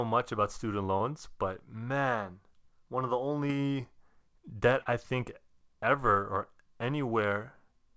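Audio packets failed to reach the decoder in time at three points in this speech, and the receiver covered each gap with short concealed packet loss, extending the preceding sound and blending back into the real signal. About 20 ms went missing at 0.98–1.02 s, between "much about student" and "but man one of"; another 20 ms at 3.48–3.51 s after "man one of the"; and about 40 ms at 4.81–4.87 s before "I think ever or". Each is heard as a brief smear or wobble in the speech, longest at the third point, all over a band that stops at 8 kHz, which fits a wideband call codec such as G.722.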